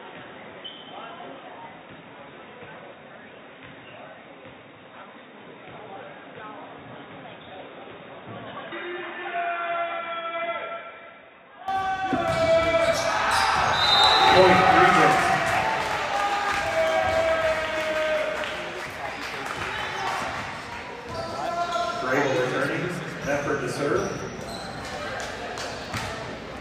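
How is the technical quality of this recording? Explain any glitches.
The recording has one clear fault. From the start to 11.68 s, the input has likely switched to a poorer device. The sound is dull and boxy, with nothing above 3.8 kHz, about 10 dB quieter, and has its own faint noise floor roughly 50 dB down. At 11.68 s it clears abruptly, with no gap. On a spectrogram, the energy stops at a flat ceiling and then widens; on the waveform, the amplitude visibly steps up.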